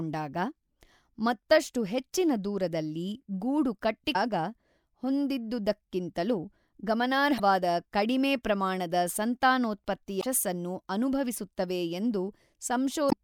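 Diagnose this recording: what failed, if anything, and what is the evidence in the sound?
Damaged data in a compressed stream at the codec stage causes brief disruptions at 4.12–4.16 s (after "ಮತ್ತಷ್ಟು ಹೆಚ್ಚಿನ ದೂರದಲ್ಲಿ ಗೂಡು"), 7.36–7.40 s (before "ಕಡಿಮೆ ಪ್ರಮಾಣದ"), 10.19–10.24 s and 13.08–13.13 s. At each one the decoder misreads corrupted frames, then hunts for the next valid frame header to regain sync.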